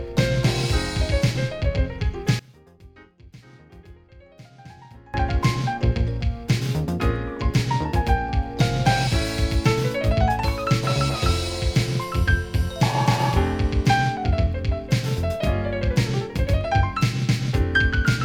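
The audio collapses by about 25 dB between 2.39 and 5.14 s, likely one channel inverted cancelling in mono; the waveform and spectrogram visibly thin out there.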